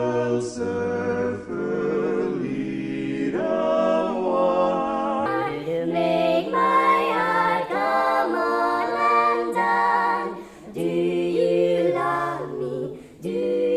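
From 5.26 s to the end, the audio has a wrong sample rate fault. Everything runs about 1.45 times too fast. Pitch rises with it, by about 6.45 semitones. Speed and pitch move together because the samples are played back faster than they were captured, with no conversion in between. The ratio fits material recorded at 22 kHz and played at 32 kHz. The result sounds hurried and high.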